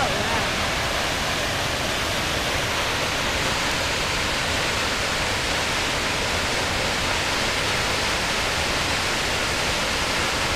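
Nothing is technically wrong with this clip.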